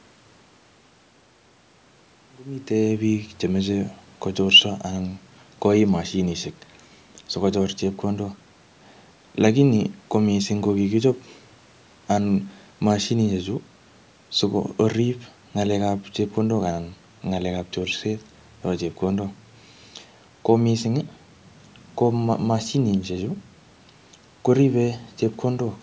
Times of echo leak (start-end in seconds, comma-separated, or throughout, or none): none